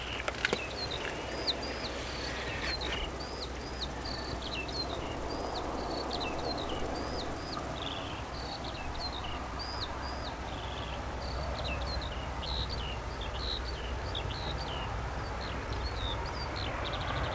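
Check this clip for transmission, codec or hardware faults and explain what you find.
Two related timing faults run through the whole clip. The audio otherwise passed through a G.722 call path, so nothing above 8 kHz is present.

Clock drift between sender and receiver: throughout, the sender's clock runs roughly 4 percent fast. The receiver's jitter buffer keeps overfilling, which forces it to discard audio to keep latency bounded.

Repeated timing corrections: from 0.05 s to 17.3 s, the receiver trims short pieces at uneven intervals, effectively playing at 104 percent. If audible at all, this comes across as slight hiccups or an unsteady tempo.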